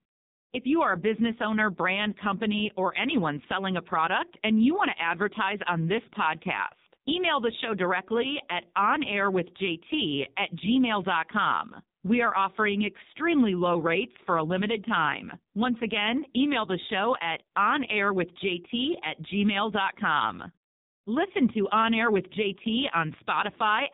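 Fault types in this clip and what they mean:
AMR narrowband mobile codec: the speech has passed through the AMR-NB mobile speech codec, so nothing above 4 kHz survives, and heavy coding damage leaves the voice buzzy and synthetic throughout, which fits a low-rate mode of about 5.9 kbps.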